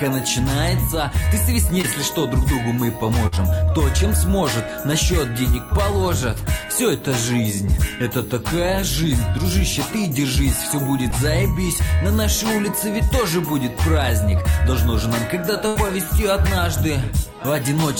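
Short concealed packet loss at 1.81 to 1.85 s: about 20 ms of audio arrived too late, and the receiver bridged the hole with roughly 17 ms extrapolated from the preceding sound before blending back, leaving a brief smear or wobble.

Burst of packet loss at 3.27 to 3.38 s: about 40 ms went missing in a run, so the receiver stretched the last sound for 48 ms while fading it. Around 11 ms is dropped outright, and the audio resumes slightly ahead.

Short concealed packet loss again at 11.11 to 11.14 s: another 20 ms gap, this time patched with about 11 ms of continued sound, heard as a quick wobble.

Burst of packet loss at 15.68 to 15.77 s: the longest gap, about 80 ms, covered by roughly 74 ms of decaying continuation that becomes a held buzz or fading hiss.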